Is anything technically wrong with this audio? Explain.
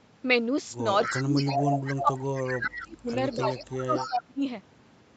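Yes. From 1.03 to 2.41 s and again from 2.74 to 4.23 s, a delayed copy of the speech trails the original by 247 ms. It is fairly loud, only a little below the speech, in the first stretch and much fainter, roughly 15 dB down, in the second. This is an echo leak, likely from a loudspeaker on the other end whose microphone picked the sound up and whose echo canceller did not remove it all before sending it back.

There is also speech suppressed in double talk. From 1.12 to 1.63 s the speech dips by around 15 dB. Between 2.02 and 4.43 s it drops out in pieces by as much as 25 dB, about 1.5 s in total. The likely cause is the echo canceller: with both sides active at once, it could not tell the talker from the echo and turned both down.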